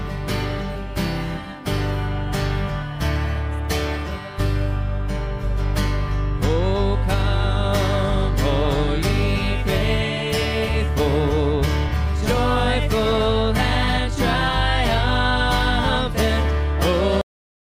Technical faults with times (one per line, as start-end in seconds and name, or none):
17.21-17.75 cut-off end